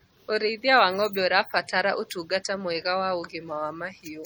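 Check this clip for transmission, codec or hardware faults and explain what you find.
One codec fault runs through the whole speech clip. Throughout, the audio sounds watery and swirly with audible smearing, likely MP3 compression, with weak frequency lines dropping in and out between frames, fitting roughly 48 kbps.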